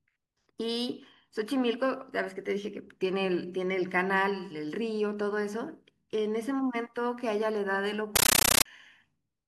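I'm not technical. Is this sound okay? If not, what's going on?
No. A compressed stream was played as audio at 8.16 to 8.65 s: undecoded Dolby Digital data came out as loud, chattering static, bursting 31 times a second.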